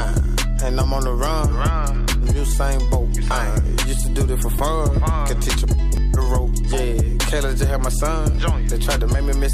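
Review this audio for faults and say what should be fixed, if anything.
A repeated buffer occurs at 4.59 s and 5.97 s. New audio arrived late, so the device replayed its last 2.9 ms block, which fits a 128-sample buffer. The block plays four extra times at 4.59 s and once extra at 5.97 s, heard as a brief buzz and a click. Raising the buffer size or the audio thread's priority would prevent it.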